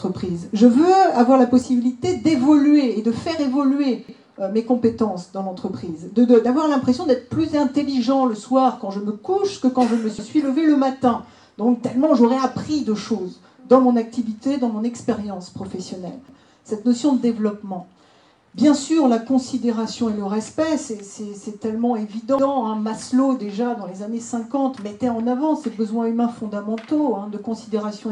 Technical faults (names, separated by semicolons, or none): sudden gain jump; overlapping chunks